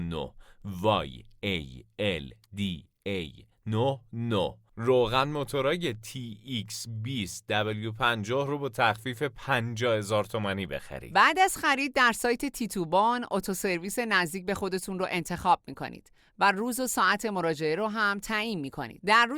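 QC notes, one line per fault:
No faults were found in this speech clip on listening.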